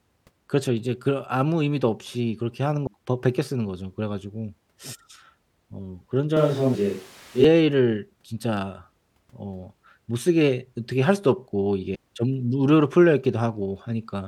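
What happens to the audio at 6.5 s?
From 6.37 to 7.44 s the speech turns abruptly hollow and roomy, likely a switch to a distant microphone; the spectrogram shows weaker lows, with noise about 25 dB down.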